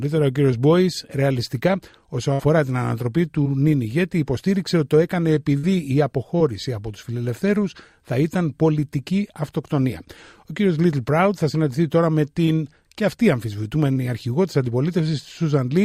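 At 0.51 s there is a short concealed packet loss. About 10 ms of the stream failed to arrive in time, and the receiver bridged it with roughly 8 ms of synthesised continuation before crossfading back into the real signal. It registers as a brief smear or wobble.

At 2.33–2.40 s a burst of packet loss removes about 60 ms in one run. The decoder extends the last sound for roughly that span, tapering it as it goes, so the gap sounds like a brief held buzz or fading hiss. The audio then picks up slightly further along, with that segment gone.

Short concealed losses of about 20 ms each follow at 3.43–3.46 s and 6.38–6.41 s. Each is patched by extrapolating the preceding pitch or noise, heard as a momentary wobble.

A second burst of packet loss at 5.58–5.64 s drops about 50 ms, which is filled and faded in the same way as the first, followed by a slight jump forward when real audio returns.

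The last two short concealed packet losses fall at 12.45–12.48 s (about 20 ms) and 13.93–13.97 s (about 30 ms).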